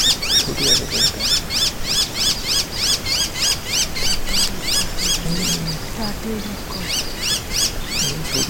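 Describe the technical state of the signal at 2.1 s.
Nothing at 2.1 s points to a technical fault; the signal is intact at that moment.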